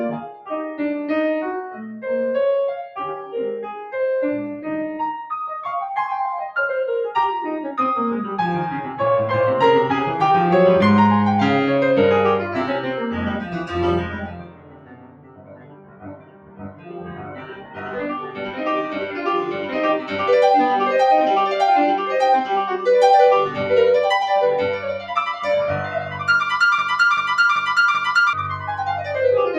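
Across the whole music track, a noise suppressor built for speech is acting on the music, treating sustained tones, ambience and reverb as noise. Its gain reduction moves over a range of roughly 10 dB, so held notes and decays sink while attacks pass. The result is a pumping, fluttering level and a thinned-out texture rather than a steady mix.

The sound is cut by the noise suppressor in five places. From 0.22 to 0.51 s the level drops by about 10 dB. The longest and deepest cut runs from 13.0 to 20.18 s, reaching about 17 dB down. Over those seven seconds sustained material sinks repeatedly and tails are clipped short. Smaller dips follow at 23.47 to 23.64 s (about 7 dB) and 24.77 to 26.27 s (about 9 dB).

From 26.78 to 28.33 s a broken-record loop takes over. A 0.39 s fragment plays four times back to back, identically, and the music that belonged in that span never arrives. The likely cause is a stall in the player, encoder or stream that kept resending the last buffered piece.

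The last cut by the noise suppressor follows at 28.54 to 29.13 s, pulling the level down by about 8 dB.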